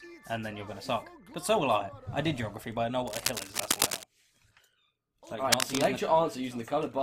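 From 3.07 to 4.03 s, and again from 5.52 to 5.85 s, dense, uneven bursts of scratching and rustling sit over the sound, roughly as loud as the sound itself. This is cable scratch noise, likely from a worn cable, connector or control carrying a DC voltage being moved: its contact resistance jumps around rapidly, and those fluctuations enter the signal as irregular noise for as long as the movement lasts.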